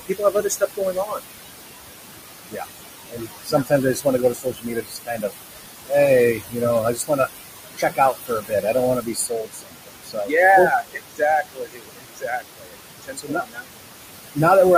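Noise suppressor artifacts run through the whole clip. The room noise sits only about 8 dB below the speech, so the suppressor works hard. It pulls the noise down by about 19 dB between phrases, then lets it back up under them. The leftover noise sinks and rises. It does not stay steady.

Speech cut by the noise suppressor starts right away, from 0.0 to 1.25 s. Here the suppressor mistakes parts of the speech for noise. It turns them down with the background, by as much as about 21 dB, over roughly 0.7 s in total. A brief cut follows at 2.5 to 2.66 s. Then comes a longer one from 3.09 to 5.33 s, where about 1.5 s of sound goes faint. From 6.34 to 7.29 s, roughly half a second is pushed down by up to about 19 dB. The worst stretch runs from 7.77 to 13.82 s. About 4 s of speech is swallowed there, with drops near 22 dB. The speech that is pulled down sounds faint.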